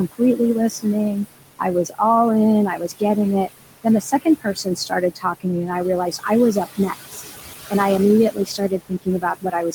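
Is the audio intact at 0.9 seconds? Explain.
No. Between 0.12 and 1.2 s the noise suppressor cuts speech: it mistakes quiet speech for noise and pulls it down by as much as about 19 dB, around 300 ms in total, so soft sounds come out swallowed. On a waveform these parts collapse to near the noise floor, and on a spectrogram the weak speech energy is missing.

The noise suppressor also leaves artifacts here, lowering the room noise by about 17 dB frame by frame. That noise sits about 12 dB under the speech, and what remains of it sinks in gaps and swells under speech. On a spectrogram this shows as a background that rises and falls with the speech.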